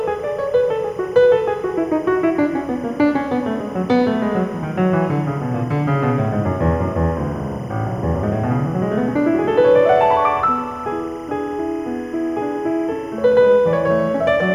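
Linear timecode running at 25 frames per second has leaked from a neighbouring track or cable into this music recording, causing timecode bleed throughout. Its square wave flipping between tones near 1 and 2 kHz sits roughly 30 dB below the music as a steady chirping warble.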